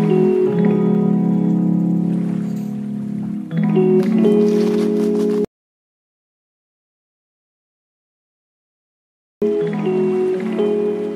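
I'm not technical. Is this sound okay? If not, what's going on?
No. From 5.45 to 9.42 seconds there is an audio dropout to silence. The sound stops dead for about four seconds, with no background noise at all. Whatever happened then is lost. The likely cause is the input briefly disconnecting or muting while recording continued.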